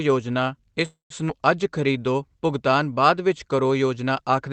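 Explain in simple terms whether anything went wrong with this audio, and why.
Three problems show up in this short speech clip, all within about one second.

A call audio freeze happens first, from 0.85 to 1.13 s. Incoming audio packets were likely held up and the receiver's buffer ran dry, so it stretched the last sound into a fading fill and then about 0.14 s of silence. The speech then resumes where it stopped, with nothing lost.

A skip ahead follows at about 1.28 to 1.32 s. Here the system dropped a small piece of audio, roughly 0.07 s, to catch up with audio that was already waiting. You hear a quick jump forward, with the two sides joined almost directly.

A jitter buffer slow-down runs from 1.63 to 1.98 s. The buffer was building a reserve by repeating tiny bits of the sound, which added about 47 ms. That stretch plays at about 89% speed but keeps the same pitch, so it sounds slightly drawn out.

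All of this travelled through a call path using the Opus codec, which limits the sound to frequencies below about 8 kHz.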